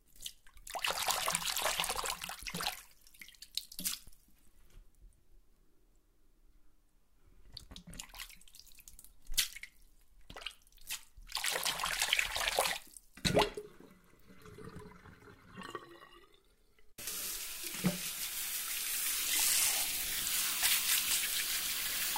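The everyday-sound recording shows no technical faults that a listener can detect.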